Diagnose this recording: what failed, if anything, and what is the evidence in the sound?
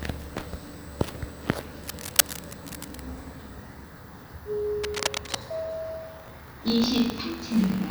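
Analogue wiring: bursts of dense, ragged scratching run from 1.83 to 3.01 s and again from 4.83 to 5.38 s, roughly as loud as the sound itself. This is cable scratch noise, likely from a worn cable, connector or control being moved so that its contact resistance fluctuates rapidly. Unlike digital crackle or dropouts, the noise is continuous and irregular, it is laid over the audio rather than cutting it, and it stops when the disturbance stops.

Driver or buffer: from 6.18 s to the end, a steady robotic rattle at 50 Hz rides on the sound. This is buffer tearing. The writer and the hardware reader of the ring buffer have drifted until they cross inside every period, so a small slice of each buffer plays audio about 70 ms stale, with hard joins on both sides. A 50 Hz rate points to a 20 ms period. Unlike mains hum, it is a rattle rather than a pure tone, and it follows the signal instead of persisting through silence.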